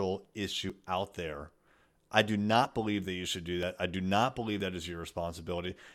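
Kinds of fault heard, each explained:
Audio missing between chunks: the likely cause is a recorder or processor handling the sound in blocks of about one second that drops a tiny slice, roughly 20 ms, each time it closes one block and opens the next. The two sides are butted together with no gap, so the speech jumps forward slightly in a steady once-per-second rhythm, at 0.70, 1.67, 2.65, 3.63, 4.60 and 5.58 s.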